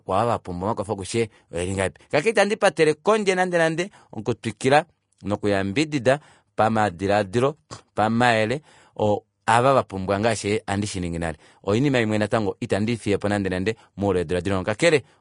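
Throughout, the speech is hissy and grainy with nothing above 10.6 kHz, likely Vorbis compression at a low bitrate, consistent with around 38 kbps. At 9.47 s, just before "ava vapumbwa ngaashi handi", pre-echo puts about 12 ms of hiss ahead of the attack, because block-wide quantisation noise fills the quiet gap.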